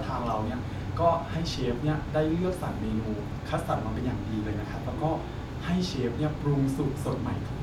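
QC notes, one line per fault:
Nothing stood out on listening to this speech recording.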